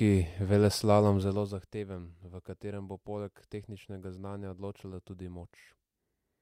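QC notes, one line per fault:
1.16–1.68 s, zipper noise: a fast, gritty ticking rides on the speech while the level drops by roughly 15 dB. The gain falls in coarse, unsmoothed steps, around fifty a second, and each sudden jump puts a small click into the waveform.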